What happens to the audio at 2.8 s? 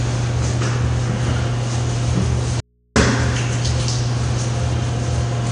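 An audio dropout to a faint residue runs from 2.60 to 2.96 s. The signal vanishes abruptly for about 355 ms, likely a break upstream of a still-live input, leaving only low mains hum far below the normal level. On a waveform this shows as a sudden near-flat gap, and on a spectrogram as a dark band crossed by thin hum lines.

AAC compression also affects this moment. The audio sounds dull and smeared, likely from low-bitrate AAC-LC coding. The spectrogram shows nothing above 9.6 kHz.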